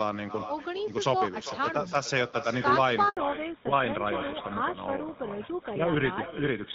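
From the start, echo with no canceller trails every phrase: a quieter copy, about 12 dB down, arrives around 400 ms later, too late and too thin to be room reverberation. At 3.09 to 3.17 s a handover gap cuts the sound dead for 80 ms, a clean silence rather than the warbly concealment of scattered packet loss. From 3.17 s to the end, fallback to narrowband strips everything above 4 kHz. The light AMR wideband (HD Voice) codec sound gives way to a duller, rougher tone that fits a roughly 13 kbit/s GSM codec. It stays permanently narrow rather than fading like a dropout.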